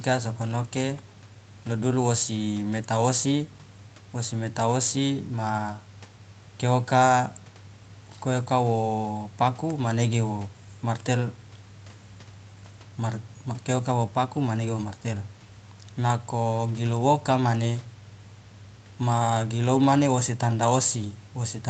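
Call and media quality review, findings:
No faults found in the speech. Content stops at 8 kHz, as expected from call microphone processing and a WebRTC call path with an Opus codec limited to that band.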